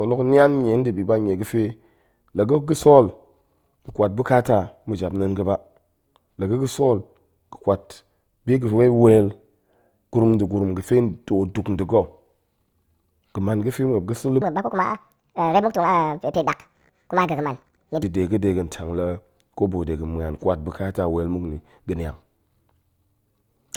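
From the very start, the speech carries the artefacts of a low-rate encode, even though this is an MP3 at a generous rate of 192 kbit/s. That mismatch points to low-bitrate audio saved at a high bitrate. The source was likely a low-rate Opus encode, around 48 kbit/s, that was re-encoded to MP3. The bigger file can't bring back what the first pass threw away, so those artefacts carry through the whole clip.

Then from 14.42 to 18.03 s there's a section at the wrong speed. It runs about 1.69 times too fast, and because speed and pitch move together, the speech jumps up by roughly ten semitones and sounds hurried and chipmunk-like until normal playback returns just before "da̱ de ga̱ de". The likely cause is that this stretch got played or edited against the wrong clock.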